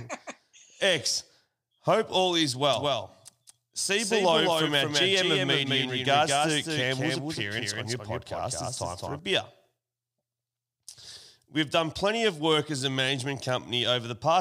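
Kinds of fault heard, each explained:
Doubled audio track: from about 2.73 s, just after "all is", a second full-band copy of the speech runs roughly a fifth of a second behind the original and a few decibels quieter, until it cuts off abruptly at 9.19 s. It is likely a second capture through a slower path. Unlike an echo or reverb, this copy arrives once, with no decay or room colouring, and it begins and ends suddenly.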